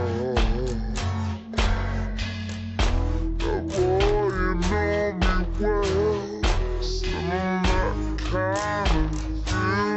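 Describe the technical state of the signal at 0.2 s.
At 0.2 s the signal shows stereo read as mono, present across the whole clip. Interleaved left and right samples are consumed sequentially as one channel, doubling the sample count, so playback runs at 0.5x speed and sits 12 semitones, a full octave, low.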